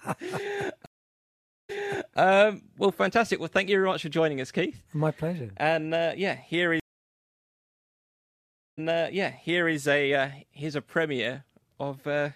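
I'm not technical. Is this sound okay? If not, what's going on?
No. The speech cuts out twice. Each time, this is a stream reconnect: the connection dropped, playback went silent, then restarted. From 0.86 to 2.18 s there is a gap of about 0.83 s, and the speech picks up about half a second earlier than where it stopped, so you hear a bit repeated. From 6.80 to 9.75 s the gap lasts almost 2 s, and the speech returns nearly a second earlier, repeating again.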